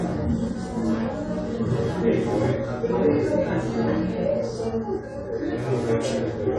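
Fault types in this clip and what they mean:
AAC compression: Nothing survives above about 11.4 kHz, so the top end sounds dull, and the codec damage is plainly audible as smeared, warbly texture. That's likely low-bitrate AAC-LC, consistent with around 32 kbps, trimming bandwidth and starving bands of detail.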